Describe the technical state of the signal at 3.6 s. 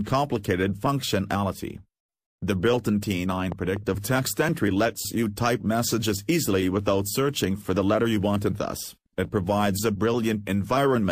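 At 3.6 s the signal sits inside a loud pop running from 3.52 to 3.79 s: two sharp thumps in quick succession, peaking roughly 10 dB above the surrounding audio, with the sound continuing underneath. The likely cause is a sudden voltage step or spike entering the chain, such as a plug, switch contact, static discharge or driver glitch. The downstream circuitry then shaped each spike into a brief thump.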